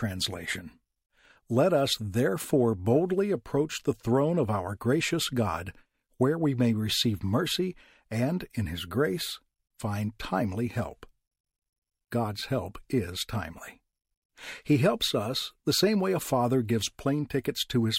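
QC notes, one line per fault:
Nothing stood out on listening.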